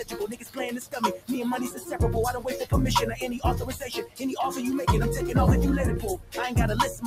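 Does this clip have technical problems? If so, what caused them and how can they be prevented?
Yes. A noise suppressor tuned for speech was applied to music or sounds throughout. It treats steady, sustained material as noise, so the level swings by roughly 10 dB as tails sink and attacks survive. On a spectrogram, sustained bands flicker and fade between onsets. Prevent it by bypassing speech noise suppression for non-speech audio.

The sound is also cut by the noise suppressor at 0.04–0.58 s, 0.81–0.97 s, 1.7–1.9 s, 4.04–4.22 s and 6.17–6.37 s, with drops of about 9 to 15 dB, deepest at 0.81–0.97 s. The waveform shows sudden envelope dips and the spectrogram shows darkened patches. Prevent this by lowering the suppression depth or turning the suppressor off.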